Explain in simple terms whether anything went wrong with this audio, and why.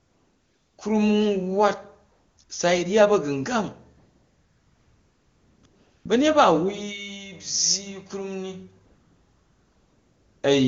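The phone decided the talker was silent and stopped sending speech, so the receiving end filled the gaps with AMR comfort noise. This is a smooth, made-up hiss that switches in and out at 0–0.77 s, 2.11–2.37 s, 2.43–2.49 s, 3.97–5.63 s (after "ryya ba̱gungang"), 5.65–6.05 s (before "ba̱nyet ba") and 8.85–10.43 s (after "krum ni"). The real background disappears during those stretches, while the HD Voice speech itself stays clear.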